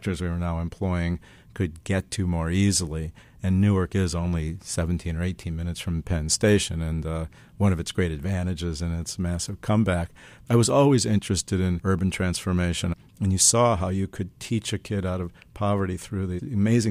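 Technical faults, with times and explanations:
Nothing technical stands out here; the speech comes through without any dropouts, glitches or other problems worth flagging.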